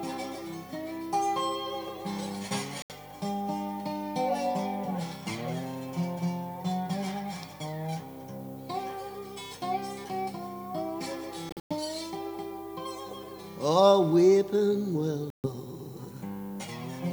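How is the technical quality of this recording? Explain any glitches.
The recording has three short gaps at 2.82 to 2.91 s, 11.49 to 11.73 s (scattered holes, longest about 107 ms) and 15.30 to 15.47 s. These are likely Bluetooth dropouts. Late packets were discarded, so the sound cuts out and resumes further on. Waveform and spectrogram show sharp-edged blank strips.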